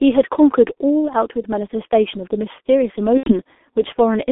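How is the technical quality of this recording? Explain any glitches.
Pretty rough, honestly. It's heavily coded telephone audio with one dropout near the end.

G.723.1 codec, throughout: The sound is squeezed into a telephone band of about 250 Hz to 3.5 kHz, and the low bitrate suggests a codec running at roughly 6 kbit/s. Its slow-updating voice model leaves everything muffled and hoarse, with smeared consonants.

VoIP packet loss concealed by the speech codec, 3.18 to 3.34 s: Around 90 ms went missing, which fits three lost 30 ms frames. The decoder kept extending its last pitch and filter while fading the gain, so you hear a buzzy or noisy, fading smear that stays weak briefly after the audio returns.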